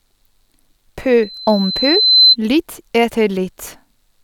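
From 1.22 s to 2.36 s the microphone is picking up the loudspeaker it feeds, and around 4.1 kHz the loop gain climbs past one, so that frequency keeps reinforcing itself. This loudspeaker feedback squeal starts as a faint, steady tone and swells over roughly a second into a piercing whistle that ends up about 10 dB louder than the speech beneath it.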